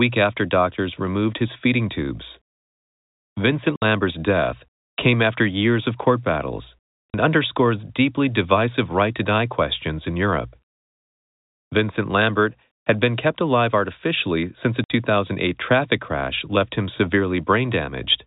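Speech over a telephone-band G.711 channel, cut by three short dropouts: 60 ms at 3.76 to 3.82 s, 40 ms at 7.10 to 7.14 s, and 60 ms at 14.84 to 14.90 s. This is packet loss filled with silence. Packets went missing and the receiver played nothing in their place, so the signal stops and restarts abruptly. Gaps in multiples of 20 ms fit 20 ms packets.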